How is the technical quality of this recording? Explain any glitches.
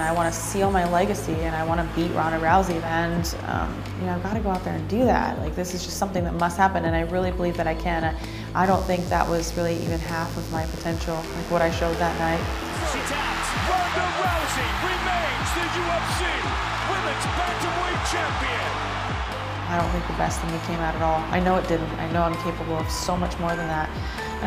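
The recording has one clear fault, a mains buzz from 8.62 to 13.95 s. Sharp switching spikes from a dimmer, rectifier or poor shielding leak in at twice the 50 Hz mains rate, spreading harmonics into the kilohertz range. It sits about 20 dB below the sound as a raspy buzz, not the smooth, low tone of plain hum.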